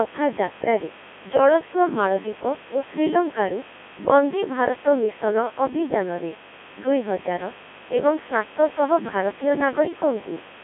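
From start to end, a poorly shielded or switching component admits sharp spikes twice per 50 Hz mains cycle, giving a mains buzz whose harmonics climb into the kilohertz range. It sits roughly 15 dB below the speech as a steady, raspy buzz under everything.

Throughout, the speech has also passed through the Codec 2 vocoder, which discards the waveform and rebuilds the voice from sine waves using only pitch, voicing, energy and a spectral envelope. The heavy damage fits a 1.6 kbit/s mode. Speech sounds robotic and buzzy, confined to roughly 200 Hz to 3.4 kHz, with nothing above 3.7 kHz.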